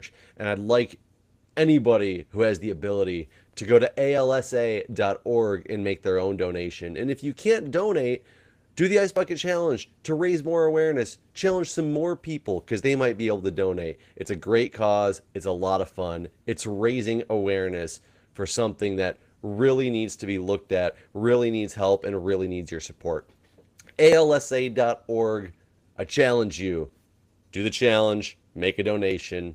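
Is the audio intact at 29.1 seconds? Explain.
No, at 29.11 s the sound jumps forward abruptly, skipping a tiny sliver with no silence in its place. This is audio missing between chunks, likely from a recorder working in 5-second blocks and dropping a fraction of time at the boundary.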